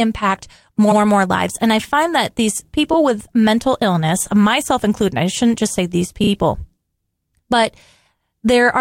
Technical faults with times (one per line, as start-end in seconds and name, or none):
0.91-0.98 repeated frames
6.23-6.29 repeated frames